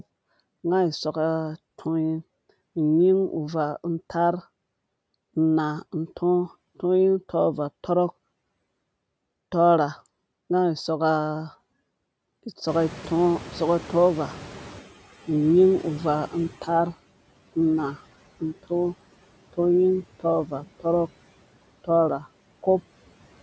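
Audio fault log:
Throughout: noise suppressor artifacts. The background is pulled down by about 17 dB, but the suppressor works frame by frame, cutting each band it judges to be steady noise. Between phrases the noise drops away, then swells back beneath the speech whenever the voice fills those bands.
12.67 to 14.94 s: noise suppressor catching up. The room noise jumps by about 20 dB around 12.5 s, and the suppressor's noise estimate is still tuned to the quieter background. For roughly 2.3 s the louder noise comes through with only about 12 dB of reduction, sitting about 19 dB under the speech, then sinks audibly as the estimate adapts. The call microphone's band limit at 8 kHz is heard as an ordinary lack of top-end air.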